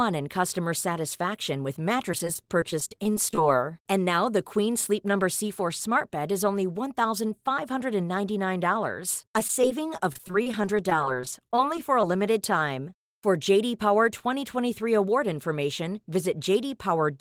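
Repeated packet loss (robotic sound) hits at 2.12–3.38 s, after "in customer satisfaction with", and at 9.22–12.04 s, before "limited time". Short gaps, up to 33 ms, get patched by stretching prior sound. The result is choppy, with pieces missing.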